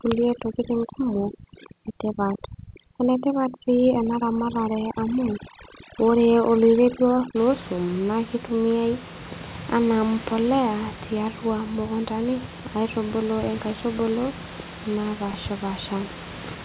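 Overdone noise removal runs from 0.0 to 7.36 s, ending just before "loo isuum". Set far too strong, it pulls individual frequency bands down wherever they sit near its noise estimate, so the room noise, about 14 dB below the speech, becomes near silence flecked with twinkling specks, and the quieter parts of the voice are removed with it.

Short concealed packet loss falls at 3.12 to 3.16 s, inside that processed stretch. About 20 ms of audio never reached the decoder in time, and the receiver bridged the gap by extending the preceding sound for roughly 16 ms before blending back, heard as a brief smear or wobble.

Chunks out of order occur at 15.31 to 15.35 s. A 10 ms chunk was delivered three chunks late and plays after audio that should follow it. Nothing is missing, but the hard joins produce a momentarily jumbled sound within the 4 kHz-limited call audio.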